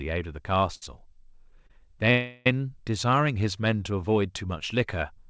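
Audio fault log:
0.75–0.83 s and 1.67–1.71 s: short stall from a late packet. The jitter buffer ran dry and the last sound was stretched for 68 ms, then 30 ms, before continuing with nothing lost. A spectrogram shows brief smeared horizontal streaks, and the waveform shows a repeating, slightly buzzy cycle.
2.11–2.47 s: call audio freeze. For 349 ms the sound becomes a fading buzz that never reaches silence, likely from packets held up in transit emptying the jitter buffer, and playback then resumes where it stopped. On a spectrogram the last spectrum smears and dims, and the waveform envelope decays.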